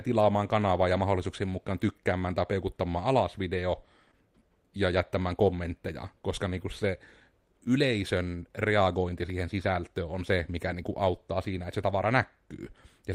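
A short concealed packet loss hits this speech clip at 4.11 to 4.14 s, between "tai peukuttamaan alas video" and "ja jättämään kommentteja koska": about 20 ms of audio arrived too late, and the receiver extrapolated roughly 11 ms from the preceding sound, leaving a brief smear before normal audio resumes.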